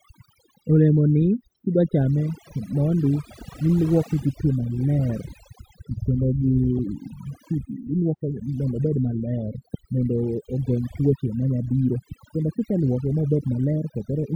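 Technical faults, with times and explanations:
Throughout, overdone noise removal: a noise reduction stage set too aggressively keeps switching individual frequency bands down or off whenever their level sits near its noise estimate, so the background drops and breaks up into twinkling specks, and the quieter parts of the speech are carved away. Unlike a noise gate, which mutes everything at once between phrases, the losses here are scattered band by band, even mid-phrase.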